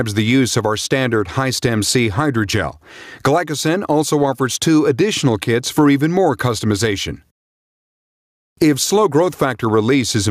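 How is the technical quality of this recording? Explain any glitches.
The recording suffers from gain pumping that runs through the whole clip. The gain swings by roughly 15 dB, so the level seems to breathe in and out. Loud and quiet passages sit unnaturally close in level, leaving the audio squashed and flat. The likely cause is input gain set far too high, with a fast limiter or compressor clamping down on every peak and releasing in the gaps.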